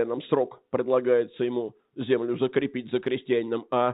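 The clip is speech, and nothing is technically wrong with it.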